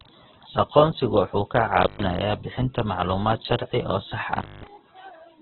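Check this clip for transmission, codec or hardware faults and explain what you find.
Two faults are present: heavy codec damage across the whole clip, and two brief cut-outs from an intermittent contact.

Opus compression runs throughout this speech. Nothing survives above about 4.2 kHz, so the sound is narrowband, and the voiced parts turn grainy, rough and noisy rather than swirling. The likely cause is Opus in its CELT music mode at a very low rate, which fits roughly 8 kbps: band energies are kept but detail is filled with folded or noise content. That graininess without the watery holes separates it from MP3.

Intermittent contact breaks the signal twice, from 1.83 to 2.03 s and from 4.36 to 4.67 s, the second just after "oo sax". A loose connection opens the line, here for about 127 ms and then about 215 ms. Each gap begins and ends with a crackle, with faint hiss in between. Those crackling edges distinguish it from a clean network dropout or a concealed lost packet.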